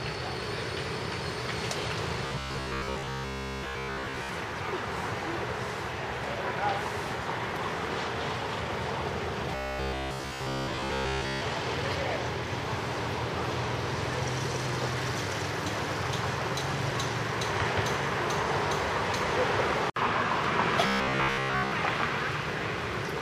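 Audio likely arrived too seldom at 2.27–4.29 s, 9.55–11.41 s and 20.87–21.72 s, so a short block was replayed over skipped material. This is robotic sound from repeated short buffers: a rigid, metallic 66.7 Hz buzz, fitting 15 ms repeats, through most of the first stretch and all of the others.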